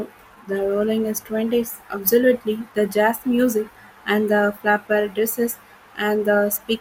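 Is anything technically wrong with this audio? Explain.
Yes. At 3.14 s in this speech there is a brief DAB burbling: weak-reception bit errors, well under one percent, corrupt MP2 audio data, fitting two damaged frames.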